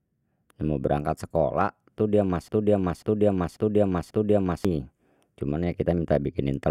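A speech clip with a broken-record loop. Just after "berangkat sekolah tu dia", at 2.48 s, a 0.54 s fragment repeats exactly four times, back to back, until 4.65 s. The speech due in that span is lost. A stalled player or stream likely kept resending its last buffer.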